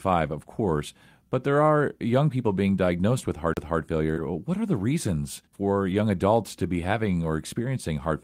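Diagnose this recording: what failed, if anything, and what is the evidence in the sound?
At 3.54 s, right after "being diagnosed", the speech ticks and goes silent for about 30 ms, then resumes from a different point in the passage rather than where it left off. That is a CD skip at the playback stage: a knock or disc flaw threw the laser onto a neighbouring turn of the spiral, so the player muted briefly and carried on from a place one or more disc revolutions away.

At 4.13 s a brief smear runs for about 25 ms, as though the preceding sound were stretched to cover a hole, before the real audio fades back in. This is short concealed packet loss on the network path. About 20 ms of the call arrived too late for the decoder, which continued the last sound, extending its pitch if voiced or filling with shaped noise if not, and then crossfaded into the genuine signal.

Within that same moment, 4.16 to 4.18 s sounds rougher and noisier, with no gap, and again at 5.90 to 5.96 s, between "are the reasons for" and "adults to be", for about 40 ms. 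Both are lost packets rebuilt from error correction in the codec: the first from one lost packet, the second consistent with two separate losses. The following packets carried low-bitrate copies that the decoder played in place of the missing audio, trading detail for continuity.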